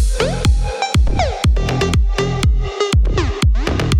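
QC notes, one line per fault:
1.08–1.28 s, phantom power thump: a deep, low thud peaking around -9 dBFS and dying away in about 44 ms. That's the supply switching on or off on a live input, its DC step pushed through the coupling caps into the signal path.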